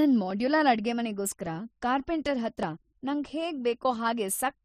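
From 0.31 s to 3.79 s the speech carries a regular click repeating every 1.16 s, around four in all. The pattern points to clock drift buffer slips as the likely cause. Two devices run on separate clocks that disagree by something like 700 ppm, so the buffer between them gradually overfills or drains. Each time it reaches its limit, a block of a few tens of samples is dropped or repeated, and that jump in the waveform is the click.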